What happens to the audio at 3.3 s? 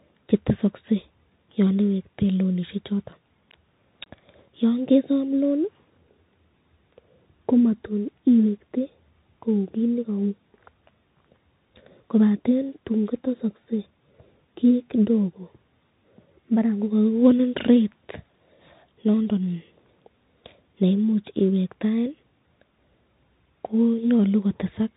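At 3.3 s the speech carries the Bluetooth CVSD headset codec, which runs through the whole clip. Each sample is one up-or-down bit with an adaptive step. Nothing above 3.8 kHz survives. S sounds turn scratchy over a granular hiss.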